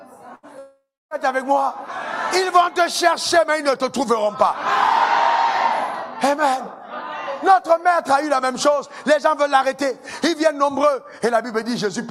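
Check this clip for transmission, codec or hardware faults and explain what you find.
Two transmission faults appear, both in the first second and a bit.

Burst of packet loss, 0.35 to 0.46 s: a short run of packets arrived too late or not at all. The receiver stretched the last sound into a fading 75 ms fill, then resumed about 80 ms further on, so that stretch is skipped.

Long network dropout, 0.59 to 1.14 s: the sound smears into a decaying buzz or hiss, then about 280 ms of near-silence before playback returns with roughly half a second missing. This likely reflects a stall in the network feed, with the receiver concealing until data resumed.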